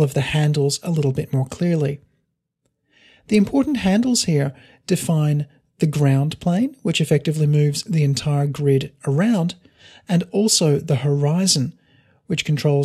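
No technical faults can be heard anywhere in the clip.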